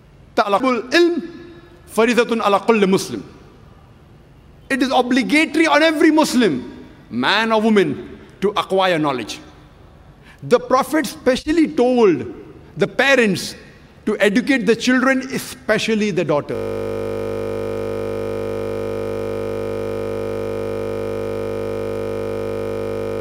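At 16.55 s a system hang loop takes over and runs to the end. The output hardware keeps replaying one 20 ms stretch of its ring buffer while the system has stalled, so the sound collapses into a steady buzz at 50 Hz.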